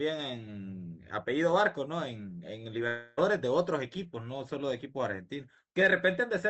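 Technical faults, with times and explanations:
2.87–3.19 s, long network dropout: about 0.3 s of sound, likely lost in transit, never arrives. The receiver fills almost the whole gap by extending the last received sound, so instead of a clean silence there is a smeared buzz that fades. The sound then resumes at 3.19 s without the missing part. The concealment carries the call codec's coding noise and loss of highs above about 8 kHz, consistent with Opus at about 32 kbps.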